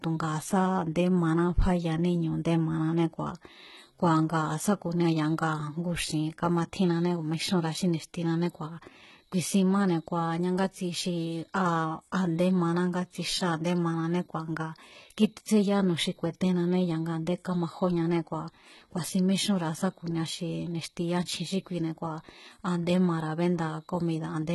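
The speech was likely passed through HE-AAC compression at a very low bitrate, which fits a 16 kbps HE-AAC v2 stream, and the damage runs from start to finish. The codec keeps only the lower spectrum and fakes the treble by copying lower bands upward under a coarse envelope, so the top end sounds synthetic. Sibilants turn gritty and lispy, upper harmonics sit out of line with the voice below, and nothing remains above about 11.8 kHz.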